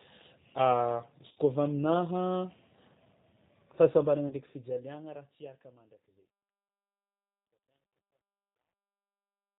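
Throughout, the speech sounds slightly rough, synthetic and band-limited, with nothing above 4 kHz. This fits G.729 codec coding at 8 kbit/s, which rebuilds the voice from a filter, pitch predictor and sparse pulses. From 1.28 to 1.38 s the voice smears into a fading buzzy tone or coloured noise, then stays weak or distorted for a moment after it returns. At 4.28 to 4.35 s there is a shorter version, and at 6.69 s a brief blip. These are VoIP packet loss concealed by the speech codec: the decoder stretched its last frame over the missing audio while lowering the gain.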